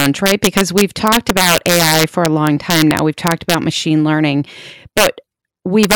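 Throughout the speech, a gain stage pushes the signal about 5 dB past the integer limit, and instead of being held there the values wrap to the opposite sign. This integer overflow hits only a small fraction of samples, the loudest peaks, producing sharp, violent cracks far harsher than clipping.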